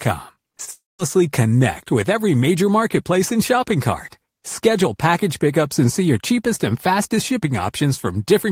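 From 0.35 to 1.03 s the speech turns choppy and robotic, with small pieces chipped out of it. This is repeated packet loss: five short gaps arrive in quick succession, the longest about 24 ms, and each is patched by stretching the sound just before it. Around 80 ms of audio goes missing across the stretch, about 63 ms of it papered over, so roughly a tenth of the span is synthetic fill.

Between 0.71 and 1.01 s the speech stops and a smeared, buzzy continuation of the last sound fades away. The final 0.18 s or so is silence before the speech resumes with the missing part simply gone. The likely cause is a long network dropout. Nearly 0.28 s never reached the listener, and the receiver tried to cover almost all of it before giving up.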